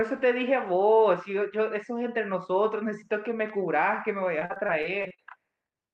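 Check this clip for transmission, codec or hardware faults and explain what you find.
One transmission fault is present. Repeated packet loss (robotic sound) runs from 4.39 to 5.2 s: nine short dropouts, the longest 40 ms, are each patched by stretching the preceding sound. About a quarter of that stretch is concealed, giving choppy speech with pieces missing. The band-limited call codec underneath, cut off around 12 kHz, points to Opus at about 32 kbps.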